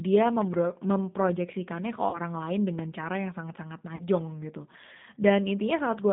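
A G.729 codec, the 8 kbit/s VoIP coder (here in its lighter Annex A form), carries this speech clip over a line passing roughly 150 Hz to 3.7 kHz. The coder rebuilds each 10 ms frame from a vocal tract filter, a pitch predictor and a handful of pulses, so the codec damage is plainly audible: the voice sounds thin, rough and synthetic, with nothing above the band edge. On top of that, VoIP packet loss concealed by the speech codec strikes twice, at 2.10 to 2.19 s and at 3.96 to 4.08 s. Each time about 30 ms of audio went missing, which fits a single lost packet. The decoder filled the gap by extending its last pitch and filter settings at falling gain, and because every frame depends on the one before, the sound is stretched into a fading buzzy tone or coloured noise and stays weakened for a stretch after the data resumes, which is why each disturbance outlasts the 30 ms gap. A loud pop appears at 0.42 to 0.56 s as two pops in quick succession, and again at 2.79 to 2.81 s as a single pop, each around 10 dB above the surrounding signal. 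These are sharp transients laid over the speech, which carries on beneath them, most likely from a sudden voltage step or pulse such as a plug, switch, static discharge or driver glitch, shaped by the circuitry downstream.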